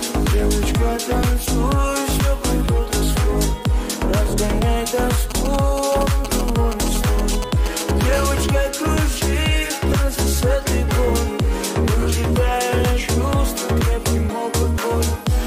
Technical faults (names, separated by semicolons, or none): GSM signalling bursts; GSM phone buzz